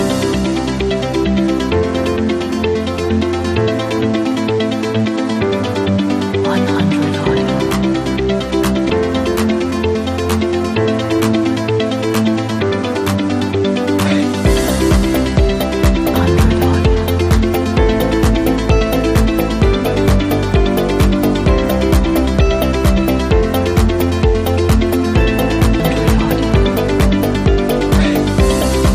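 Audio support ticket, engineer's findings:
Compressed frames skipped at 8.9 s, 16.14 s and 25.80 s. The audio jumps ahead by roughly 0.2, 0.4 and 0.5 s, which fits about two, four and five dropped frames of 92.9 ms each. The likely fault is in the decoder or the file itself. On the waveform and spectrogram, the envelope and harmonics break off abruptly with no silent gap.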